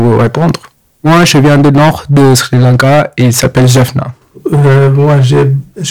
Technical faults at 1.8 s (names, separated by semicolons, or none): hard clipping